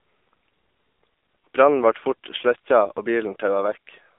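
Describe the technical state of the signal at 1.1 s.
At 1.1 s it's the AMR narrowband mobile codec, present throughout: bandlimited to roughly 300 Hz–3.6 kHz, nothing above 3.7 kHz, with buzzy, synthetic speech that points to a low bitrate near 7.4 kbps.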